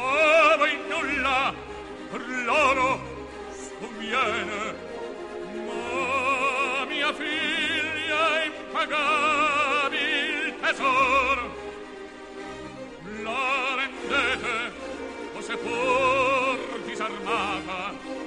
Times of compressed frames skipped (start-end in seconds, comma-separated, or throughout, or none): none